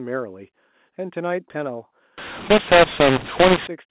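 A mu-law and A-law mix-up runs from 2.18 to 3.67 s. Speech coded with the mu-law table is decoded through the A-law one, so levels are scrambled: some swell, others shrink, and near-silent samples jump upward. The speech turns harsh and gritty, with hiss filling the pauses.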